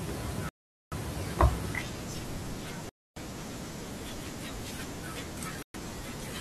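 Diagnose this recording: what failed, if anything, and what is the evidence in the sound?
The speech drops to silence three times: 0.49 to 0.94 s for about 430 ms, 2.89 to 3.17 s for 270 ms, and 5.63 to 5.76 s for 120 ms. This is likely a Bluetooth stall on the wireless playback link. The receiver's buffer emptied while delayed packets were resent.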